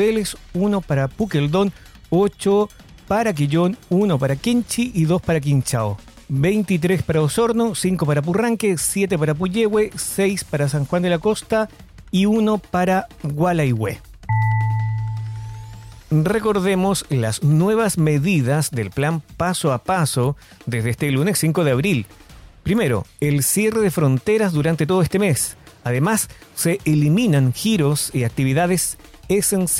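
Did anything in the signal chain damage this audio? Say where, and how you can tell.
No, nothing in the signal chain damaged this audio.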